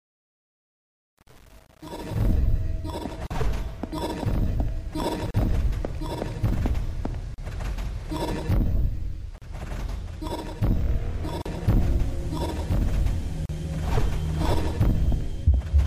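Right from the start, the fade that runs up to about 2.33 s has truncation distortion on it. The gain stage behind that fade kept too few bits, which fits something like a 7-bit path, and added no dither, so while the level is low the waveform collapses into a handful of coarse steps. You hear that as a gritty texture.

Inside that fade, at 1.23 s, comes the first gap at a join of encoded pieces, about 41 ms of dead air. It then repeats roughly every 2 s, at 3.27, 5.31, 7.34, 9.38, 11.42 and 13.46 s, each about 38 ms long. The audio was evidently encoded in separate chunks and spliced without trimming the encoder's start-up delay and end padding, so each join leaves a short hole with smeared edges, and the sound resumes right where it stopped.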